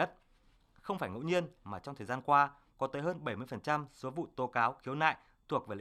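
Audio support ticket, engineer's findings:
No audible faults found on this speech recording.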